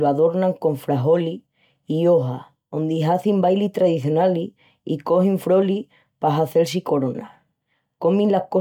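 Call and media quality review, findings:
Nothing to flag on this speech recording; no faults turned up anywhere in it.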